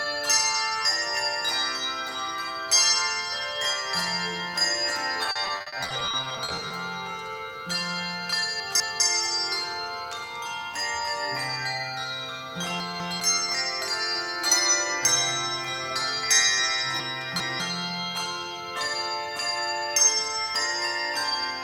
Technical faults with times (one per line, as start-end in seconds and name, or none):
5.23-6.71 repeated packet loss (robotic sound)
8.60-9.00 chunks out of order
12.80-13.20 chunks out of order
17.00-17.60 chunks out of order